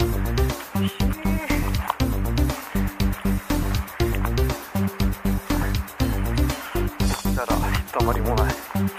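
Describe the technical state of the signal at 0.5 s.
Nothing is wrong with the signal at 0.5 s; the audio there is intact, with no dropout, distortion or other technical fault to be heard.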